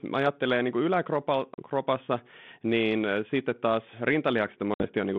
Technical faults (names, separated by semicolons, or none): packet loss on an ADPCM call